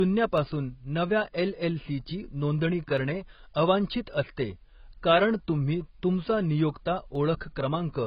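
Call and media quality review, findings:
AAC compression, whole clip: speech dull and smeared, top end cut off, warbly fizz on sibilants. Likely a heavily starved AAC-LC encoder, consistent with a very low bitrate around 16 kbps, dropping high bands and quantising coarsely.

Dropped samples at 0.38 s, 2.98 s and 7.15 s: single sharp clicks, each a thin vertical line. Likely a tiny fraction of a millisecond missing each time, so the waveform jumps ahead. Too brief to lose any sound, just the snap.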